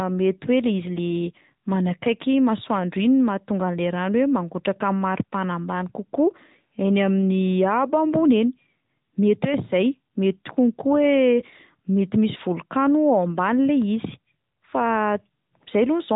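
From start to finish, the speech has passed through the AMR narrowband mobile codec, the AMR-NB coder of 2G and 3G phone calls. It samples at 8 kHz and rebuilds the voice from a vocal-tract model driven by sparse pulses, so nothing above 4 kHz survives. The result is dull, boxy and plainly synthetic, with a buzzy edge that fits a mid-range mode near 10.2 kbps.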